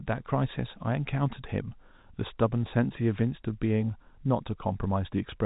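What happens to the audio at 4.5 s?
Nothing goes wrong at 4.5 s; the speech carries on intact through that moment, with only the steady narrow telephone band of the G.711 coding that runs throughout.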